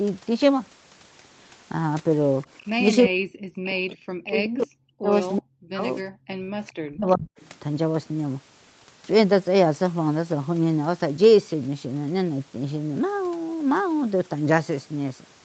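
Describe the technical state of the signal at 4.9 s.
At 4.9 s the echo canceller, likely confused by both sides talking, is turning the speech down: speech suppressed in double talk from 3.06 to 5.12 s, dipping very deeply.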